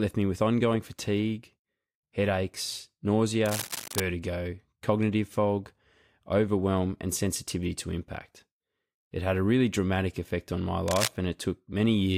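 Cable scratch noise appears from 3.46 to 4.00 s, then louder from 10.88 to 11.09 s. Rough, uneven rustling sits over the speech, likely from a worn connector being moved.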